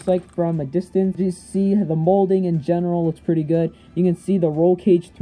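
No technical fault can be heard anywhere in the recording; the signal stays continuous and steady throughout.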